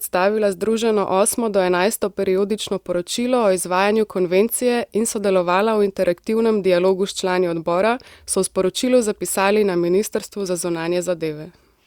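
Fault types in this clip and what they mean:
Nothing's wrong with the audio here; the speech comes through without a single technical fault to point at.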